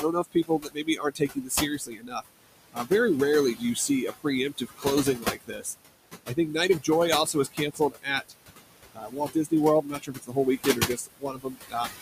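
Throughout the clip, the background sinks between phrases and swells back under them. These are noise suppressor artifacts: the room noise, about 11 dB below the speech, is being pulled down by about 20 dB frame by frame.

Speech cut by the noise suppressor makes parts of the speech sound swallowed and faint, with dips of about 19 to 22 dB. The suppressor mistakes quiet speech for noise and turns it down along with the background. This happens from 0.01 to 2.22 s (about a second affected), from 2.73 to 2.91 s (a brief moment), from 3.55 to 5.75 s (under a second), from 7.26 to 8.33 s (under half a second), and from 8.93 to 11.99 s (around one and a half seconds).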